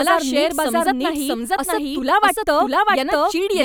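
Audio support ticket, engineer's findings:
Doubled audio track, whole clip. Full-band second copy of the speech trails by about 0.7 s at roughly equal level. No decay tail or room colour, so not acoustic echo. Likely a second capture path or misaligned edit layering two copies.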